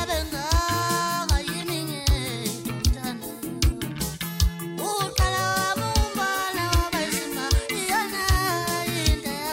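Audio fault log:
No audible faults anywhere in this recording.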